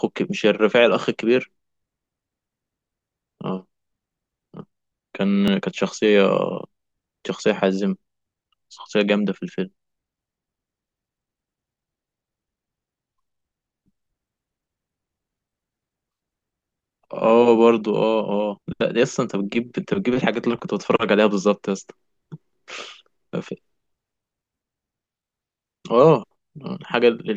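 At 5.48 to 5.50 s, 15.50 to 15.52 s and 25.52 to 25.55 s, the speech has overlapping chunks. The audio was handled in 10 s blocks. Each new block begins slightly before the previous one ended. So about 23 ms of sound plays twice at every join. Each join is heard as a brief click or stutter. They come at a steady 10 s rhythm.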